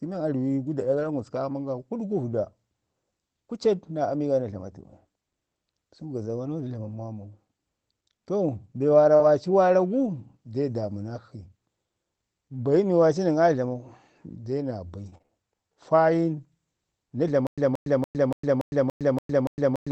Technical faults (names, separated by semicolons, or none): lost packet rebuilt from error correction; short concealed packet loss; scattered short gaps; stutter with silent gaps